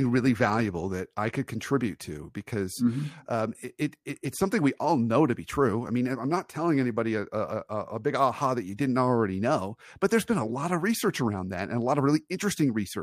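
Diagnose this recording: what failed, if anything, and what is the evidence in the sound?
Nothing failed: no stage between capture and playback leaves any audible mark on the speech, so there is no evidence to cite.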